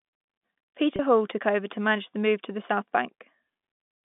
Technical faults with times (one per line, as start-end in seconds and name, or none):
0.96-0.99 packet loss with pitch repetition